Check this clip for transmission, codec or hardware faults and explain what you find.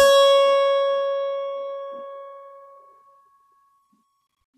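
No transmission, codec or hardware faults turn up in this music clip.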